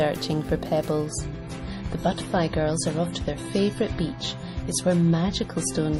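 At 1.07 s the audio drops abruptly to an adaptive stream at a lower bitrate, with no gap. From there to the end, nothing remains above 11.5 kHz and codec artefacts thicken, which fits a switch from roughly 128 kbit/s MP3 to about 32 kbit/s.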